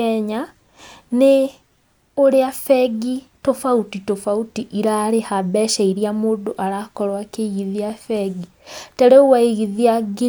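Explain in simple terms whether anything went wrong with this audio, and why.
Nothing went wrong here: listening to the whole recording, no glitches, gaps, dropouts or other technical problems can be heard anywhere in it.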